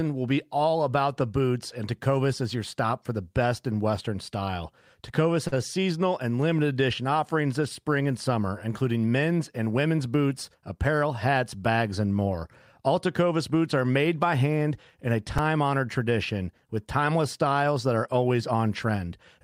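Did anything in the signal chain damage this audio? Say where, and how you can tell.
Yes. On the network side, a packet arrived late at 5.47 s and the jitter buffer ran dry. Instead of leaving a gap, the receiver stretched the last bit of speech for about 46 ms until the packet turned up, then resumed from the same point. That is a short stall from a late packet: nothing is lost, but the sound is held unnaturally long through 5.54 s, with a faint buzzy or dipping quality.

At 15.38 s the fault sits at the driver or device-buffer stage. Fresh audio did not reach the output in time, so the same tiny block was played four extra times, each join a hard edge. The block length of about 1.3 ms fits a 64-sample buffer, so this repeated buffer is too short to hear as a stutter and comes across as a click or brief buzz. Roughly 5 ms of real audio is skipped.

Back in the network receiver, from 18.27 to 18.96 s the jitter buffer was holding more audio than its target and worked the backlog down. 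It trimmed many short, pitch-period-sized slices in succession, around 70 ms in total. This jitter buffer speed-up pushes the speech to about 108% of normal rate while keeping its pitch, so the last stretch sounds slightly hurried rather than higher.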